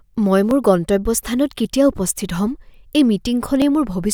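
Clock drift buffer slips from 0.51 s to 3.62 s: about four regular clicks in the speech, roughly every 1.03 s. They likely come from two unsynchronised clocks, off by several hundred parts per million, so the buffer periodically drops or repeats a few dozen samples.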